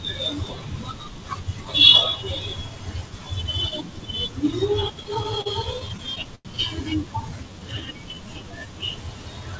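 Speech that catches and drags between 5.04 and 6.47 s: the flow keeps halting in a dozen short hitches, each held over by a continuation of the preceding sound, the longest about 96 ms, for 229 ms of filler, about 16% of that stretch. These are repeated stalls (stutter). Packets kept reaching the receiver late, its jitter buffer repeatedly ran dry, and each pause was bridged by extending the last sound rather than dropping anything, so no audio is lost but the rhythm stumbles. From 7.25 to 8.67 s the speech instead slows smoothly to about 88% of its pace with the pitch unchanged, stretching sounds by 175 ms in total. This is a jitter buffer slow-down: with its reserve running low or its target delay just raised, the receiver replayed single pitch periods and slivers of pauses to build up a reserve. The band stops at 8 kHz throughout, which fits a G.722 call codec.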